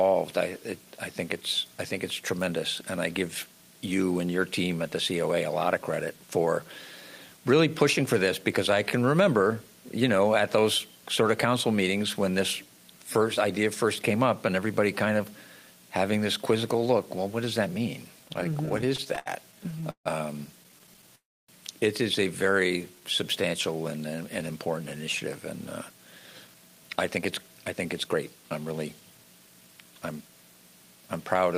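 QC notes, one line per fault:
18.19 to 20.07 s and 20.63 to 21.09 s, repeated stalls (stutter): the packets kept arriving late, so the jitter buffer kept running dry and the receiver stretched the last sound to cover each gap. That's 26 short holds in the first stretch, the longest 151 ms, then 10 tiny ones of up to 14 ms. Nothing's lost, but it drags and hiccups.
21.15 to 21.50 s, call audio freeze: the sound hangs and then drops to near silence for about 270 ms of the 330 ms gap, likely because packets were held up in transit. When they land, the audio carries on where it left off, so it's a pause with nothing missing.
22.53 to 23.02 s, jitter buffer slow-down: the buffer was low, so the receiver repeated tiny pitch-period slices to build a reserve, adding 68 ms. That's about 88% speed over half a second, so things sound a touch drawn out at the same pitch.
25.89 to 30.22 s, jitter buffer speed-up: the buffer was holding too much, so the receiver trimmed short pitch-period pieces over and over, roughly half a second in all. 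It runs at about 111% speed at the same pitch and sounds a bit rushed.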